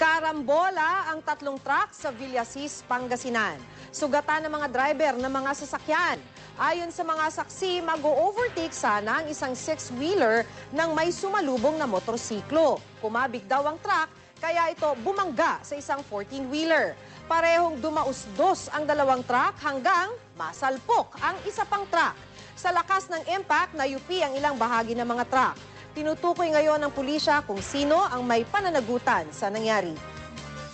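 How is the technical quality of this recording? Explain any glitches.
The recording came through a call codec, and the sound carries nothing above 8 kHz. There is one glitch.

At 20.54 s there is a short concealed packet loss. About 10 ms of audio reached the decoder too late. The receiver filled the gap by extending the preceding sound, then blended back into the real signal. It is heard as a brief smear or wobble.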